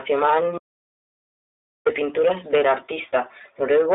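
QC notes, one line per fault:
Throughout, iLBC codec: the speech sounds narrow and boxed-in, plainly rough and slightly synthetic, with nothing present above about 3.8 kHz and little below 300 Hz. Each 20 ms frame's excitation is coded on its own at a low rate, which fits 15.2 kbps, so fine detail is reproduced only coarsely, giving a buzzy, artificial texture. The top of the band is cut off by the narrowband design, and that is what makes it sound like a telephone line.
0.58 to 1.87 s, audio dropout to silence: the speech stops dead at 0.58 s and the track goes to silence, with no room tone or hiss, for about 1.29 s. It resumes abruptly mid-flow on "pinturas del". A silent gap rather than quiet background points to the input being lost while recording carried on, likely a disconnected device, a failed link or a stray mute, so whatever was said in that stretch is gone.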